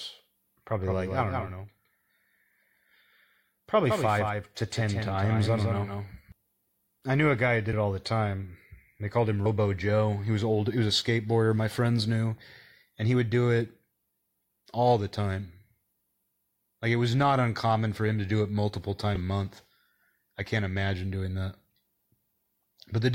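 A second capture path, likely a slower route feeding the same signal into the mix, produces a doubled audio track that is already under way when the recording begins and runs until 6.32 s. A full-band copy of the speech trails the original by roughly 150 ms, sitting only about 5 dB lower, so every syllable is followed by a flat, dry repeat with no room decay. At 6.32 s the copy cuts out abruptly.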